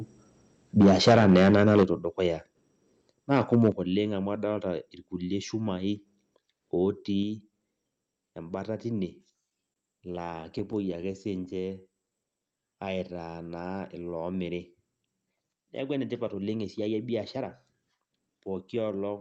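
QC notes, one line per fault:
0.80–1.83 s and 3.32–3.69 s, microphone overload: the loudest peaks are flattened against the converter ceiling, giving a harsh, crackling edge to the strongest syllables. The first stretch is the worse one, driven roughly 11 dB past full scale with about a tenth of the samples squared off. The second is milder, around 3 dB over and only a small fraction clipped. The likely cause is microphone input gain set too high for the talker's level.
0.83 s, 1.83 s and 3.72 s, microphone volume stepped down: the whole signal, voice and background together, drops abruptly in single steps of about 3 dB, then about 8 dB, then about 6 dB. Each step lands during or right after a clipped passage. This fits the call software's automatic gain control, which likely sensed the overload and cut the device input volume in one move each time rather than ramping it. The result is an audible level staircase early in the clip.
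9.31–11.53 s, repeated stalls (stutter): the audio repeatedly hesitates, with 18 short holds where the last bit of sound is stretched to bridge a wait. Together the holds add up to about 0.21 s, and the longest is 28 ms. No content is lost, but about a tenth of this span is concealment, so delivery drags and stutters. Packets were arriving late or slower than playout, draining the jitter buffer over and over.
11.54–14.55 s, jitter buffer slow-down: the audio plays at about 89% of normal speed with pitch unchanged, so sounds are drawn out. Repeating single pitch periods and slices of pauses added about 0.33 s here. The jitter buffer was running low or had raised its target delay, so the receiver stretched playout to refill the buffer.
16.34–19.17 s, jitter buffer speed-up: the audio runs at about 109% of normal speed, again at unchanged pitch, and sounds hurried. Roughly 0.3 s of material is removed in small cuts of one or a few pitch periods. 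The buffer had accumulated more audio than its target, as happens when delayed packets arrive in a burst, and the receiver trimmed playout to bring latency back down. The call codec path itself band-limits the audio to 8 kHz.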